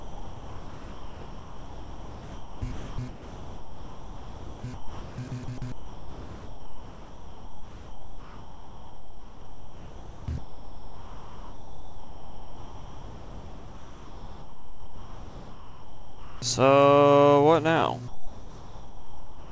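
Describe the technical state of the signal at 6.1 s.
At 6.1 s the sound is chopped by the voice detector, which is likely the cause of a fault running from 0.0 to 16.42 s. The sender's detector keeps toggling transmission off, and about 15.6 s of this stretch is filled with synthetic comfort noise, so the audio is choppy. On a waveform this shows as abrupt drops to a flat, low-level noise floor. On a spectrogram it appears as featureless, smooth noise bands interrupting the detailed content, all capped at 8 kHz by the G.722 call path.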